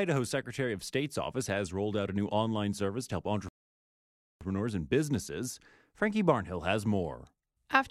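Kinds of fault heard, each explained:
Rebuffering stall: the player used up its downloaded audio and paused playback until more data arrived, so the speech drops to silence after "online service to help" at 3.49 s, then picks up exactly where it left off with "and businesses" at 4.41 s, adding 0.92 s.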